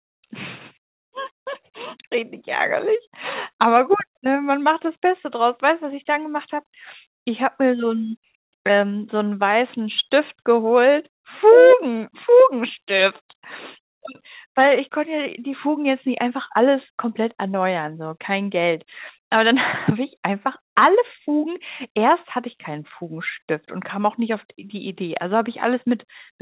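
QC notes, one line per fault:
No faults heard.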